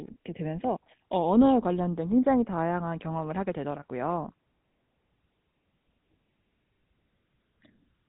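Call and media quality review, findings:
GSM full-rate codec path, throughout. Vocal-tract model driven by sparse regular pulse excitation, consistent with a 13 kbps rate. Plainly audible buzzy, gravelly roughness on the speech. Band-limited, nothing above 3.9 kHz, so sibilants dull and the speech sounds muffled.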